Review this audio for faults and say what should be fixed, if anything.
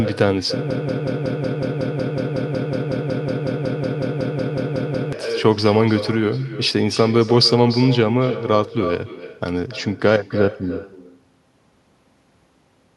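A broken-record loop runs from 0.71 s to 5.13 s: a 184 ms fragment repeats 24 times back to back, replacing the speech that belonged there. The likely cause is a stalled player, encoder or stream resending its last buffer. Add stall detection that drops stale buffers.

Echo with no canceller is present throughout. The speech returns about 300 ms later, about 13 dB quieter and thinner, picked up from the far end's loudspeaker by its microphone. Enable acoustic echo cancellation on the far-end device.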